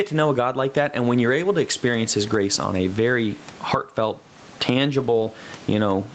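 Right from the start there's gain pumping: the level swings by around 15 dB, likely a hot input hitting a fast limiter. Then from 4.99 to 5.25 s, a lost packet rebuilt from error correction: several dropped packets were filled by low-bitrate Opus copies, so about 140 ms sounds rougher and noisier, with no gap.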